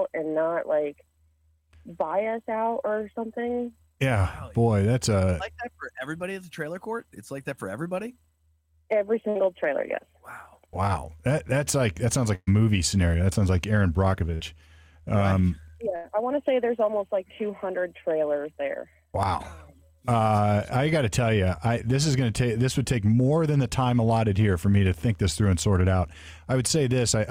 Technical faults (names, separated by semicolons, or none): burst of packet loss